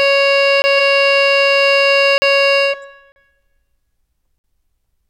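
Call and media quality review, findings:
Music clip, four blocks of digital silence, dropouts at 0.62–0.64 s (20 ms), 2.18–2.22 s (40 ms), 3.12–3.16 s (40 ms), 4.38–4.44 s (60 ms). Hard cut to zero and back, no fade; the 20 ms one and the 60 ms one each read as a short hole. Gaps in 20 ms steps point to whole output buffers going out unfilled, likely a render thread missing its deadline.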